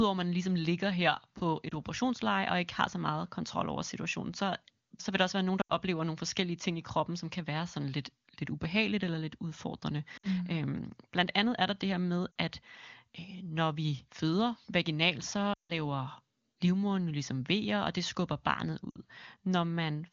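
Lost AMR speech frames break the audio at 1.70 s (before "operationsleje og ikke har"), 5.61–5.72 s, 10.17–10.27 s, 12.32 s, 15.53–15.74 s and 18.90–18.98 s. The decoder repeats the last good frame at falling gain, so short losses warble, while the longest run drops to near silence before recovering roughly.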